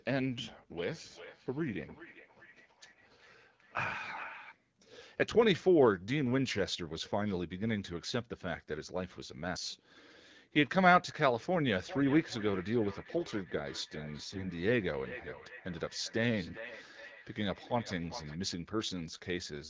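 From 0.73 to 4.56 s and again from 11.78 to 18.39 s, feedback echo between two devices sends the sound round again roughly every 400 ms. The repeats are thinner and ringing, up to about -17 dB and then about -14 dB below the direct sound, and show on a spectrogram as faint copies stacked at regular intervals.

Within the second stretch, from 14.24 to 14.46 s, AMR bit errors on a weak link make the sound hoarse and gargly, with smeared, noisy harmonics on the spectrogram.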